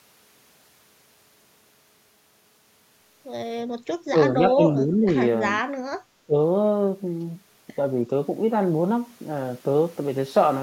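Speech with four brief dips at 4.1 to 4.15 s, 4.48 to 5.07 s, 5.61 to 5.71 s and 6.26 to 6.36 s, ranging from around 10 dB to roughly 25 dB deep. This is likely speech suppressed in double talk, where the echo canceller attenuated the near talker while the far side was also active.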